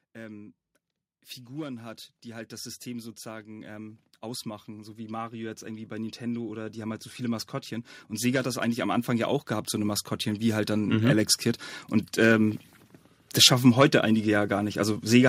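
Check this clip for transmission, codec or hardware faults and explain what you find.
One fault is present. From 1.5 s to 11.4 s there is automatic gain rising. The gain control judged the input too quiet. It raised its gain slowly, by about 20 dB. Voice and background noise swell together over nearly ten seconds.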